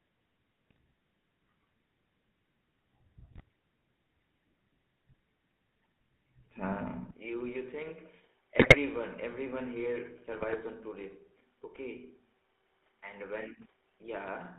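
From start to finish the speech passes through the GSM full-rate codec at what sounds like 13 kbps. It carries a steady buzzy, gravelly roughness from the pulse-driven vocal-tract model and nothing above 4 kHz. It is constant, not bursty, which separates it from the bit-error damage.

GSM bit errors break in at 0.70 to 0.78 s and 3.32 to 3.41 s. Corrupted filter, pitch and gain values make the voice squawk, pop and gargle for a few frames before it recovers. These are brief local outbursts, unlike the codec's even texture.

At 7.11 s the input switches to a poorer device, likely a changeover to another microphone or a headset's call profile. There is no gap at the switch. The band narrows to nothing above 3.8 kHz, the level drops by roughly 10 dB, and a new noise floor appears some 35 dB down. It lasts to the end, a permanent change of tone rather than a momentary burst.

Further GSM bit errors follow at 8.58 to 8.75 s and 10.32 to 10.61 s. 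The second is the longest gargling stretch in the clip, while the first shows the voice breaking up again on the duller device sound.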